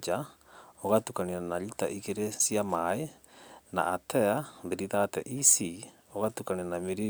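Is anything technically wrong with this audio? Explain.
No, nothing technically wrong is audible here.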